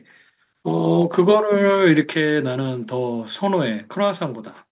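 A speech clip carried over a narrowband call path with nothing above 4 kHz, consistent with a G.711 mu-law link, showing two kinds of fault. At 1.02 s and again at 2.04 s the whole signal, voice and background alike, drops abruptly in level, by about 2 dB and then about 4 dB. This is likely a microphone volume stepped down by the call software, cutting input gain in discrete steps after detecting an overly hot input. Between 1.2 and 1.32 s, and again from 1.85 to 1.92 s, the loudest syllables take on a harsh, crackling edge where their peaks are flattened, running about 1 dB past the converter's limit with a small fraction of samples clipped. This is likely microphone overload, with the input gain set high enough that the peaks hit the converter's limit.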